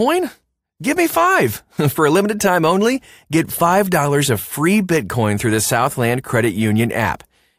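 No technical faults can be heard anywhere in this recording.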